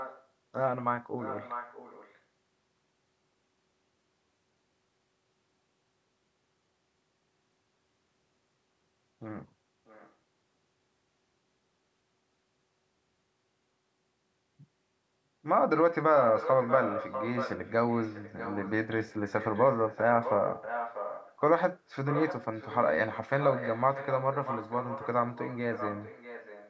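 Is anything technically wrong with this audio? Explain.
Yes. Echo leak at 0–0.26, 1.2–2.19, 9.86–10.12, 16.18–18.71, 19.04–21.36 and 22.05 s to the end: a copy of the speech returns 640 ms late, faint early, barely audible near 10 s, and clearly louder after 16 s. The likely cause is a far-end loudspeaker whose echo canceller let its microphone pickup through.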